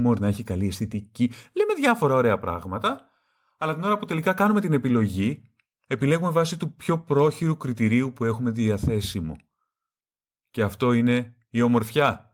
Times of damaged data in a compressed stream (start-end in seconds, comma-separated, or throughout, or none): none